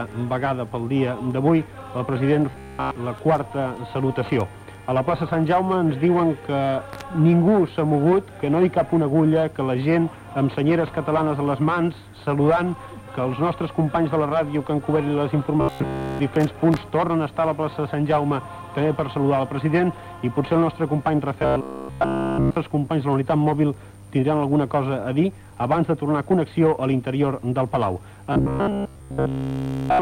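From 2.51 to 2.96 s, 15.61 to 16.19 s, 21.40 to 22.57 s and 28.33 s to the end at 30.01 s, the sound turns into a rigid, metallic buzz at 66.8 Hz: robotic sound from repeated short buffers. A span of about 15 ms is looped almost without break, which likely means the incoming audio stalled and was skipped. Unlike a stutter or dropout, there are no gaps, and the buzz stays at a fixed rate.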